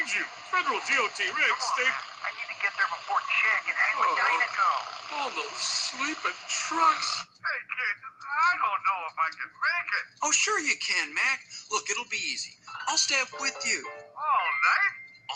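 No technical faults can be heard, and the audio carries the ordinary character of a working WebRTC call path, with the top end rolling off around 12 kHz in a way that fits Opus coding at about 32 kbps.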